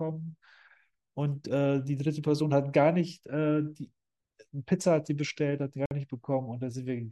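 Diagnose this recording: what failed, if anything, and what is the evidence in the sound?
At 5.86 s the speech cuts to silence for about 52 ms, until 5.91 s, then resumes. This is likely a Bluetooth stall at the network stage: radio interference delayed packets, the headphones' buffer emptied, and playback paused until retransmissions arrived.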